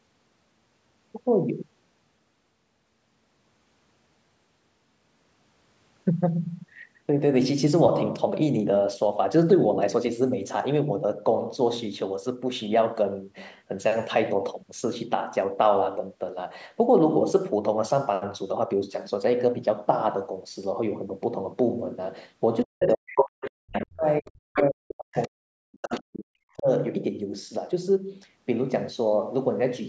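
From 22.64 to 26.68 s the talker's voice repeatedly sinks and breaks apart, losing brightness and at its worst dropping by roughly 40 dB, with around three seconds of this window affected in total. This is speech suppressed in double talk. With both ends speaking at once, the echo canceller likely could not tell the talker's own voice from the loudspeaker echo, so it turned the microphone signal down along with the echo.

In the same stretch, a second voice cuts in as short scraps at 22.81 to 23.25, 23.41 to 23.51, 23.73 to 23.86, 24.55 to 24.68, 25.13 to 25.28 and 25.82 to 26.01 s. The first scrap is about as loud as the talker. Most of the rest sit roughly 10 dB lower, and the one at 25.13 s is much fainter. This is the other side's voice leaking through, which is likely loudspeaker playback that the echo canceller failed to remove fully from the microphone.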